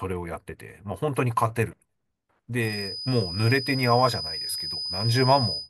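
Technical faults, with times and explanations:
2.59 s to the end, feedback whistle: a thin, steady tone at 5 kHz sits about 10 dB under the speech, swelling and fading slowly in level, likely from a loudspeaker-to-microphone loop hovering right at the edge of feedback, so one frequency rings on without ever running away.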